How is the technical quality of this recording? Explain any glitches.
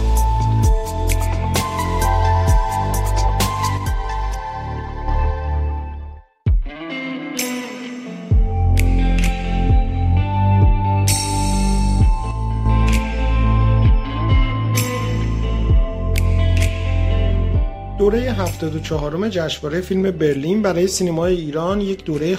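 The recording has two short level faults. Between 3.78 and 5.08 s, and again from 12.31 to 12.66 s, one channel drops out, likely losing one stereo side. Once folded to mono, the shared sound falls abruptly by about 6 dB, and anything present only in that missing side vanishes until it returns.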